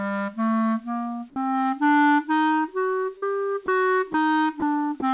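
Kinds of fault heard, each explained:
Sound dropped by the voice detector, at 1.30 to 1.36 s, 3.66 to 3.68 s, 4.12 to 4.14 s and 4.60 to 4.62 s: the sound briefly gives way to a flat, steady noise bed, 60 ms the first time and 20 ms at each later point, before the real audio returns. The likely cause is a sender-side voice detector judging these moments to be background and pausing transmission, so the receiver substitutes comfort noise until the detector triggers again.
Short concealed packet loss, at 3.18 to 3.24 s: about 40 ms of audio failed to reach the decoder in time, and the receiver covered the gap by extending the preceding sound, carrying its pitch forward where it was tonal or filling with shaped noise where it was not, then crossfading back into the real signal. The result is a brief smear or wobble lasting roughly 41 ms within the narrowband call audio, which has nothing above 4 kHz.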